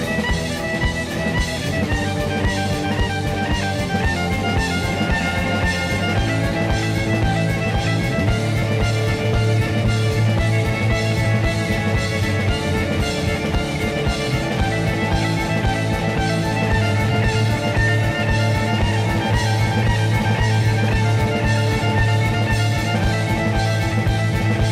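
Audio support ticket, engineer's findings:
No audible faults found; the signal is continuous and stable throughout, with no disturbances attributable to any component in the chain.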